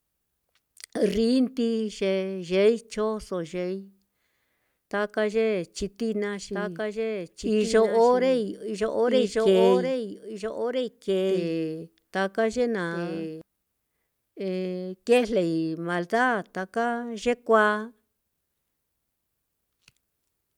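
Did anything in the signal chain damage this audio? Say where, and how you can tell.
Yes. From 6.53 s to 13.41 s the speech carries a doubled audio track. A second full-band copy trails the original by about one and a half seconds, sitting roughly 5 dB lower. It has no decay or room colour, so it is not an echo. It appears and vanishes abruptly at both ends. The likely cause is a capture or buffer stage recording the same signal twice through a slower path.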